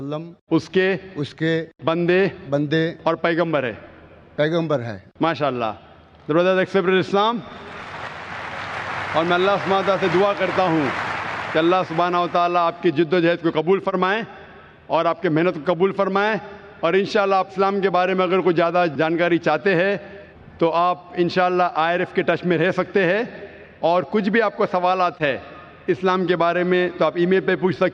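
Nothing stood out on listening to this recording.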